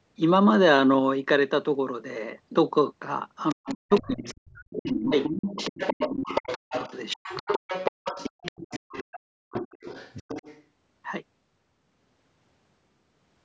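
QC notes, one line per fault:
3.49–4.39 s, 4.73–9.19 s and 9.51–10.62 s, other side's voice leaking through: a second, fainter voice runs underneath the main talker, about 20 dB down in the first stretch, closer at about 10 dB down through the long middle stretch, and about 15 dB down in the last. This is likely loudspeaker playback of the far end reaching the microphone and not fully removed by the echo canceller, so the residue survives as a distinct second voice.
3.54–5.15 s, 5.53–6.74 s and 7.15–7.48 s, speech suppressed in double talk: the main talker's level repeatedly collapses, by as much as about 40 dB, in pieces totalling roughly a second, half a second and a short fraction of a second. These dips fall where the leaked voice is present, which points to the canceller likely failing to tell near talker from echo during overlap and turning the whole signal down, clipping the talker's own speech.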